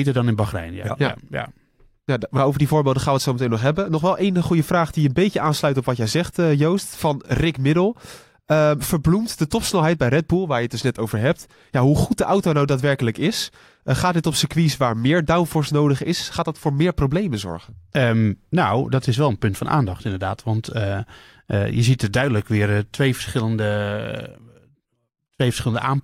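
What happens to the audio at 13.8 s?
Nothing goes wrong at 13.8 s; the speech carries straight through that moment with no dropout, click, glitch or other fault.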